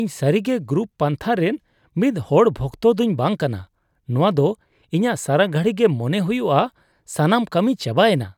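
No technical faults can be heard anywhere in the recording.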